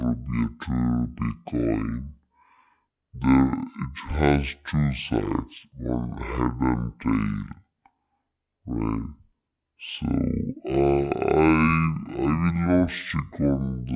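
Throughout, the speech drags at half speed and sits a full octave low, the classic wrong sample rate fault: audio recorded at 16 kHz is played back at 8 kHz.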